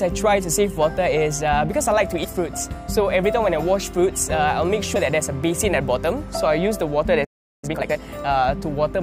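The audio shows compressed frames skipped twice: at 2.23 s it jumps ahead by about two 23.2 ms frames (roughly 50 ms), and at 4.95 s by about three (roughly 70 ms). From 7.24 to 7.64 s a playback stall leaves about 0.38 s of silence, likely because the player ran out of data. The waveform drops to a flat line there, and the spectrogram shows an empty gap. Time-compressed catch-up follows from 7.64 to 8.02 s at twice normal speed. The audio sounds hurried but keeps its pitch. Spectrogram events appear packed closer together while harmonic spacing stays the same.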